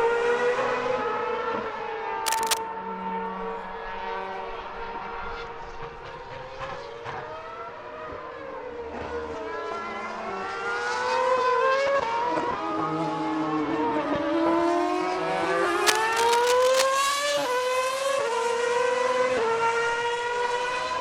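Two bursts of cable scratch noise break in: a short one from 2.25 to 2.58 s, about as loud as the sound itself, and a longer, slightly quieter one from 15.86 to 16.84 s. That uneven rustle is likely a worn cable or connector shifting contact.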